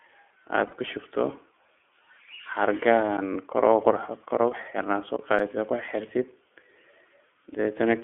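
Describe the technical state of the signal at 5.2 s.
At 5.16 s there is a block of digital silence, about 17 ms long. The sound cuts out and returns with no fade, and the gap is heard as a very brief hole in the speech.

Underneath, as across the whole clip, the iLBC codec is plainly audible. The band is held to roughly 250 Hz to 3.4 kHz, and each frame's excitation is coded independently, giving a rough, synthetic quality. This fits iLBC's 13.33 kbps mode with 30 ms frames.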